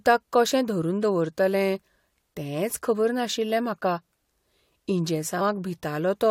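At 2.70 s a burst of loose connector crackle runs for about 80 ms, to 2.78 s. A worn or dirty contact is flickering between connected and open, so the speech is chopped into fragments. It sounds like an irregular scratchy rattle. On a waveform it appears as jagged dropouts and spikes. On a spectrogram it shows as a cluster of thin vertical broadband lines at uneven spacing.

At 5.40 s compressed frames are skipped. The decoder never plays a short run of encoded audio, so the speech jumps ahead by about a tenth of a second. That is consistent with a few frames of 23.2 ms each going missing or being rejected as damaged. The waveform shows an abrupt change in the speech envelope. The spectrogram shows a discontinuity where the harmonic patterns don't line up.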